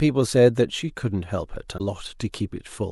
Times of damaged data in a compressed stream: 1.77-1.81

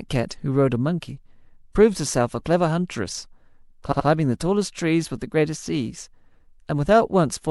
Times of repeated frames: 3.91-4.06

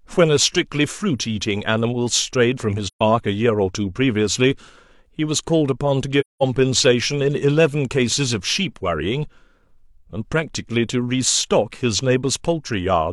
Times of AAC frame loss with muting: 2.87-3.01, 6.20-6.43

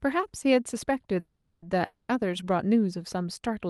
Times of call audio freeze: 1.19-1.67

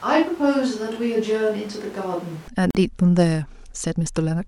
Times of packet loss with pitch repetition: none

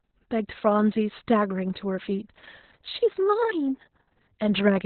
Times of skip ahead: none

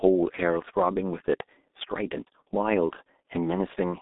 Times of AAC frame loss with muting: none

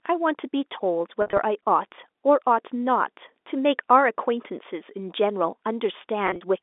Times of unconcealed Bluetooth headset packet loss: none

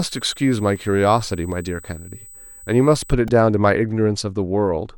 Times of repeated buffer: 0.76, 3.28

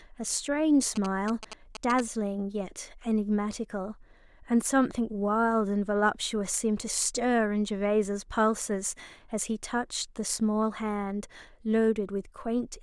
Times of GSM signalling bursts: 0.96-2.01

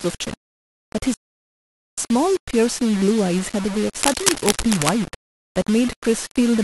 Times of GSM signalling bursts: none

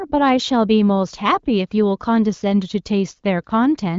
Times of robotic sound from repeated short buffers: none

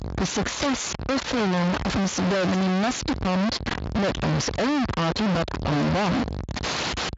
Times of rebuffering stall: none

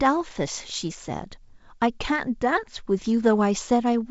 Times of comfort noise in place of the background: none

